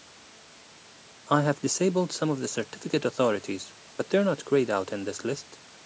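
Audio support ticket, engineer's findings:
Nothing stood out on listening to this speech recording, which shows the usual call microphone processing, with the lowest bass trimmed away and nothing above 8 kHz.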